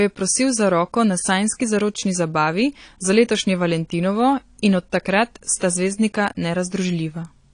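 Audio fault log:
Throughout: likely AAC compression. Nothing above 9.8 kHz, so the speech sounds dull. Coarse quantisation smears sibilants into fizz. The damage fits a 32 kbps bitrate.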